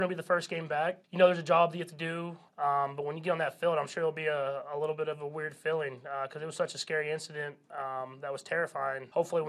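Nothing stood out as a technical problem on listening.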